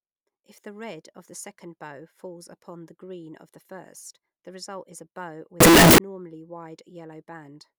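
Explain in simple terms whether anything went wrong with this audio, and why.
From 5.60 to 5.98 seconds the speech breaks into a blast of very loud, harsh distortion, with even quiet moments as loud as everything else. The likely cause is signed and unsigned mixed up: the 16-bit samples were misread, so every crossing through silence jumps to full volume.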